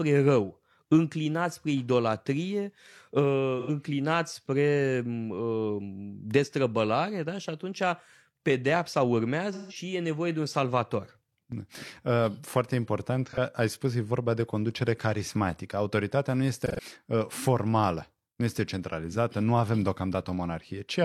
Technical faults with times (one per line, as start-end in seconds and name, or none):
3.59-3.70 AAC frame loss with concealment
9.52-9.76 AAC frame loss with concealment
13.26-13.38 AAC frame loss with concealment
16.59-16.81 AAC frame loss with concealment